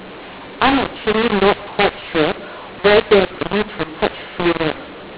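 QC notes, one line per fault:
throughout, mu-law and A-law mixed up: the speech sounds harsh and gritty, with loudness jumping unevenly, and the pauses between phrases are filled with a steady hiss instead of falling quiet. The telephone audio was encoded with G.711 mu-law but decoded as A-law. The two laws map the 8-bit codes to different levels, so every sample is rescaled wrongly. Some come out too loud, others too soft, and near-silent samples are raised well above zero. The band stops near 4 kHz, which fits 8 kHz telephone sampling.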